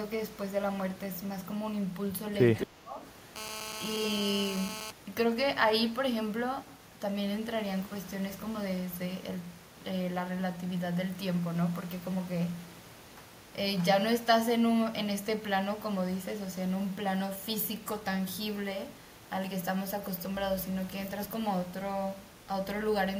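Echo leak, from 2.55 to 2.66 s: a delayed copy of the speech trails it by about 209 ms, around 10 dB quieter. The likely cause is a loudspeaker-side echo canceller letting part of its microphone pickup through and sending it back.

Speech suppressed in double talk, from 2.66 to 2.99 s: the speech dips sharply, at its deepest by roughly 20 dB, for about 0.3 s while the other side is also talking. Unable to separate the talker from the loudspeaker echo, the echo canceller likely attenuated both.

GSM phone buzz, from 3.36 to 4.91 s: a hard, raspy 217 Hz buzz rich in harmonics sits about 8 dB below the speech and holds steady. A nearby 2G phone in a call transmits 217 bursts per second, and the audio circuitry rectifies those radio pulses into audible noise.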